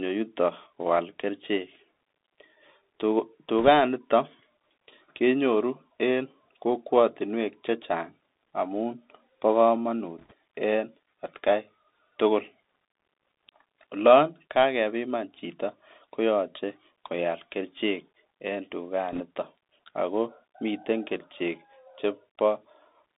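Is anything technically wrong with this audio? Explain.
Yes. Throughout, the speech carries the Bluetooth CVSD headset codec. It codes one bit per sample with adaptive steps, and sound is confined to roughly 250 Hz to 3.7 kHz, leaving granular hiss and scratchy sibilants rather than the watery swirl of a perceptual codec.

There are also bit errors on a Bluetooth voice link at 3.59–3.68 s, at 10.19–10.32 s just before "en etkai tukul", and at 19.12–19.22 s just after "koyoche koal kerichek en". Flipped bits, around 1.5 to 2 percent of them, cause brief rushing crackle. Because each bit carries little weight, these are bursts rather than the loud clicks of packet loss.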